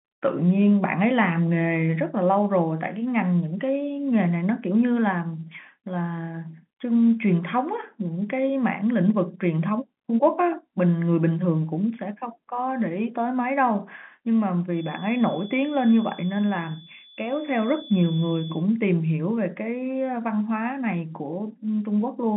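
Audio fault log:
14.68–18.68 s, feedback whistle: a thin, steady 3.4 kHz tone sits well under the speech and swells and fades slowly, likely a loudspeaker-to-microphone loop held just short of runaway.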